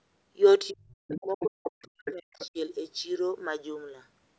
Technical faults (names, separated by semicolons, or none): speech suppressed in double talk; other side's voice leaking through